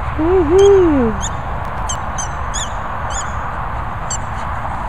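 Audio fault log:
1.63–1.95 s, processor overload crackle: about ten buffers of around 10 ms each miss their deadline and are skipped, so the audio jumps with hard edges, heard as gritty tearing. The waveform shows abrupt discontinuities, and the spectrogram shows dense vertical broadband streaks.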